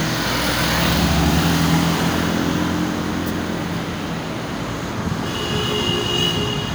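At 1.03 s there's a single sharp click, and at 5.35 s another just like it. Both are most likely dropped samples: a tiny fraction of a millisecond goes missing from the stream, so the waveform jumps straight from one value to a later one. That's far too brief to lose any audible sound. You just hear the abrupt step as a click, and on a spectrogram each shows up as a thin vertical line.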